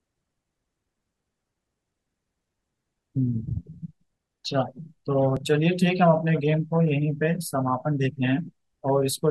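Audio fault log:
5.37 s, dropped buffer (overrun): the recording software likely failed to read its input buffer before the hardware overwrote it, discarding about 10 ms of speech. The two sides join directly with no gap, so there is a tiny skip forward.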